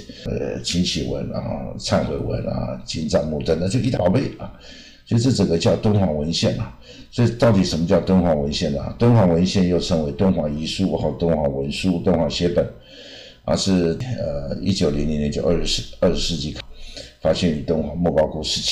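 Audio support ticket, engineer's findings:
Damaged data in the compressed stream: corrupted bytes in the encoded file or feed. Decoder misreads affected frames, loses sync, hunts for next frame header. Heard as brief chirp or blip at 0.26, 3.97, 14.00 and 16.60 s.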